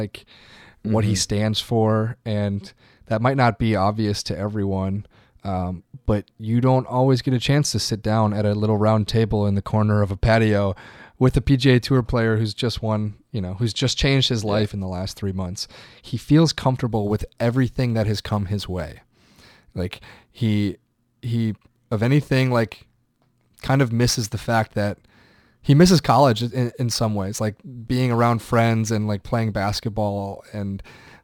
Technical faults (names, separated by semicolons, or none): crude rate conversion